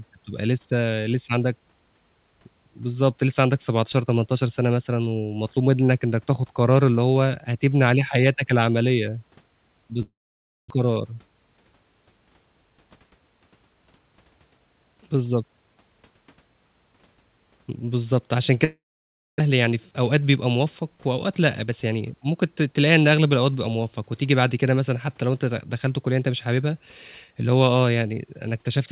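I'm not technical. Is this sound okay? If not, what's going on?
No. At 10.02 to 10.72 s and again at 18.64 to 19.42 s, the speech cuts out: a short fading buzz, then about half a second of silence, and it resumes with a piece missing. This is a long network dropout, likely audio that never arrived over the connection.

Shortly after each gap, from 12.7 to 13.12 s and from 19.5 to 20.98 s, the speech sounds hurried, about 13% and 9% faster, with the pitch unchanged. This is a jitter buffer speed-up: the receiver trims tiny slices to catch up on built-up delay, roughly 70 ms and 150 ms in total.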